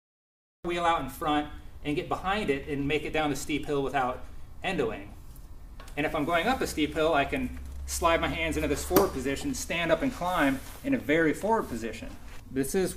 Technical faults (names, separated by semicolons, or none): cut-off start